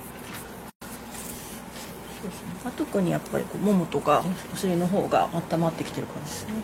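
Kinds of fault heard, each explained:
Gap at a join of encoded pieces: at 0.70 to 0.82 s the sound drops out for about 116 ms. The silence has edges smeared by the codec, and the sound resumes where it stopped. This happens when separately encoded segments are spliced without trimming. The start-up delay of silence from one encoder run and the padded final frame of the other both remain, leaving dead air in the middle of continuous audio.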